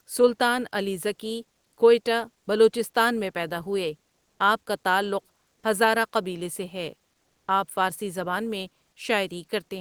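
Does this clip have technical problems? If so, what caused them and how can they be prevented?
Yes. In two pauses in the speech, from 4.27 to 4.39 s and from 7.27 to 7.47 s, the faint background turns into a flat, featureless hiss, about 1 dB louder in the first gap and about 3 dB quieter in the second. This is comfort noise in place of the background, likely from discontinuous transmission such as Opus DTX: the sender stops sending during silence and the receiver fills the pause with synthetic noise. Disabling DTX on the sending encoder prevents it.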